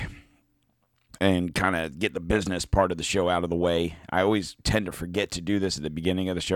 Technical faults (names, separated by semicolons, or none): none